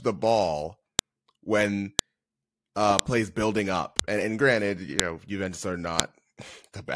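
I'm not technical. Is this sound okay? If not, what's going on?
No. A file header played as audio causes sharp clicks at 0.99 s (after "the ball"), 1.99, 2.99 (before "plays building up"), 3.99 (after "uh plays building up"), 5.00 and 6.00 s. The sound was joined from one-second pieces, and each piece's hidden file header was played as a loud snap.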